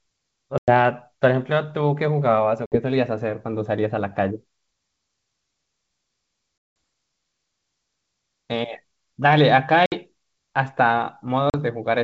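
Packet loss on an ADPCM call punches silent holes at 0.58, 2.66, 6.58, 9.86 and 11.50 s, lasting 100, 60, 180, 60 and 40 ms. Afterwards the decoder's predictor and step size lag the sender's, so the speech returns slightly distorted, then settles.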